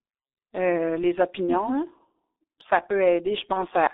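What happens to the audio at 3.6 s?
Between 3.53 and 3.64 s, VoIP packet loss concealed by the speech codec stretches the sound into a fading buzzy tone or coloured noise. The gap fits one lost 30 ms frame. The decoder repeats its last pitch and filter, so distortion lingers after packets return. Beneath this, the G.723.1 codec at 6.3 kbit/s confines sound to 300 Hz–3.7 kHz. It sounds muffled and hoarse, with blurred consonants.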